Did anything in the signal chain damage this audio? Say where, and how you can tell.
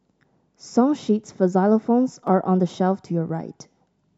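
Yes: periodic USB or driver dropouts at the driver stage. Ticks recur every 1.02 s from 0.24 to 3.29 s, where a blocked bus skips about a millisecond of speech.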